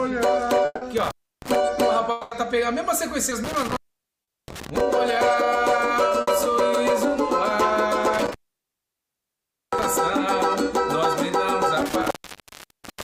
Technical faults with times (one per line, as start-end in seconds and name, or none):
0.65-0.83 long network dropout
0.97-1.55 intermittent contact
2.11-2.33 long network dropout
3.29-3.33 short concealed packet loss
3.44-4.81 intermittent contact
4.23-4.29 short concealed packet loss
6.21-6.29 burst of packet loss
8.13-9.84 intermittent contact
11.80-13.03 intermittent contact
12.33-12.37 short concealed packet loss